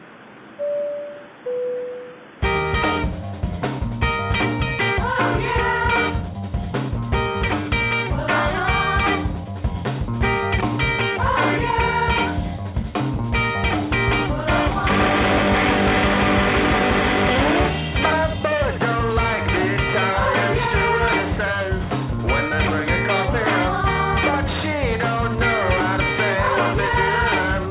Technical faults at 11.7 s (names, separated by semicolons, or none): none